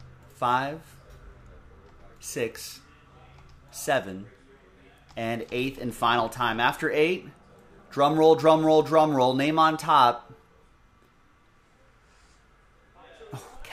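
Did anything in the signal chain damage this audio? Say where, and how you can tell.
No, no signal-chain damage detected.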